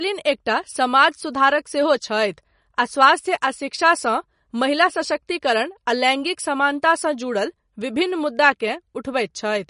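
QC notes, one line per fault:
Throughout: MP3 compression, likely near 40 kbps; treble cut off above 10.6 kHz, and weak spectral lines flickering between frames give plainly audible watery swirl.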